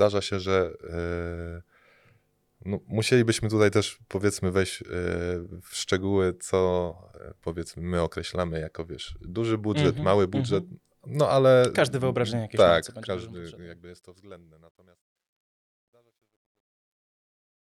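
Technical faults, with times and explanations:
12.75–17.67 s, truncation distortion on a fade: after "wyobrażenie jakieś" the fade-out turns gritty, and it is at its worst from 14.62 s. The gain stage drops low bits without dither, which fits 12-bit resolution, so the quietest waveforms collapse into coarse square steps.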